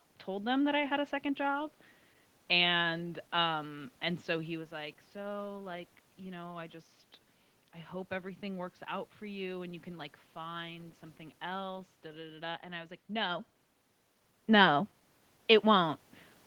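No system faults can be heard in the signal path; the background noise belongs to the room, and the level shifts of the voice at about 4.5 and 13.5 seconds come from the talker moving relative to the microphone.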